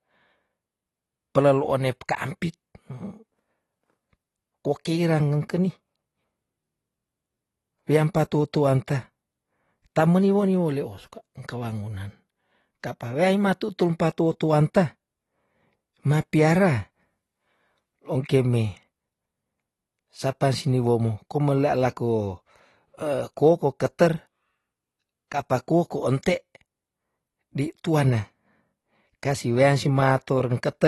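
From start to finish the speech sounds dull and smeared, with nothing above about 12 kHz, and there's a fizzy, warbling edge on sibilants and held vowels. That's likely AAC compression, AAC-LC squeezed hard enough that the encoder cuts the top end and starves bands of bits, leaving holes or noisy fill in the spectrum. The damage is plainly audible, which fits a low bitrate somewhere around 32 kbps.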